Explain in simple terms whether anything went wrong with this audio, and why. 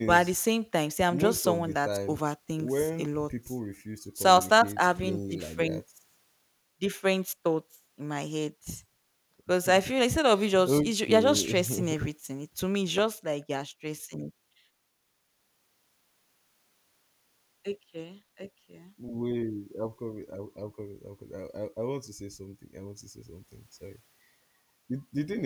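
Nothing went wrong; this speech recording has no faults.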